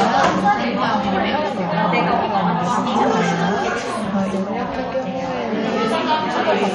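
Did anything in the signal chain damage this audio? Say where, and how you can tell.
Yes, at the codec stage. Throughout the clip nothing is present above 11.1 kHz, with plainly audible swirly, watery texture and smeared attacks. This points to MP3 compression, likely at a low bitrate near 48 kbps, where the encoder drops treble and switches weak frequency lines on and off.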